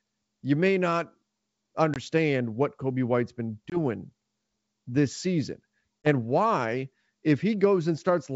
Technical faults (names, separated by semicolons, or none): packet loss on an ADPCM call